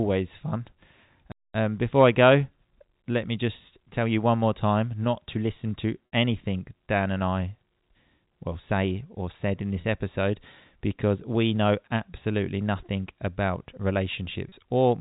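At 1.32 s a playback stall occurs, likely because the player ran short of data or its output thread was held up. The speech breaks off into silence for about 226 ms, until 1.54 s, and then resumes.

Later, packet loss with pitch repetition appears three times. The receiver covers each missing stretch by repeating the last pitch cycle. At 6.06–6.12 s the 60 ms gap, which fits two lost packets, sounds briefly held and buzzy before speech returns. Shorter 30 ms gaps at 9.81 s and 14.49 s each give a slight held buzz. All of this sits within the band-limited G.711 telephone sound.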